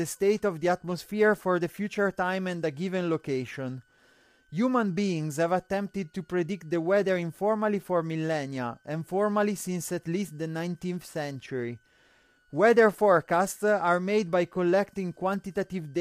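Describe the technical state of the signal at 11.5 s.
At 11.5 s, as throughout the clip, a faint high whistle sits under the speech, drifting between 1.42 and 1.57 kHz at roughly 40 dB below the signal. This is a switching supply whistle: a power supply's switching circuit is running in an audible burst mode or beating with another supply, and its pitch wanders as the load shifts.

The speech is also plainly rough and grainy, with noise filling the gaps between harmonics and a thin, synthetic-sounding top band. That points to low-delay AAC compression at a low bitrate, likely the AAC-ELD mode used in video calls. The damage is consistent with around 32 kbps, where too few bits are left to code the voice's harmonics cleanly.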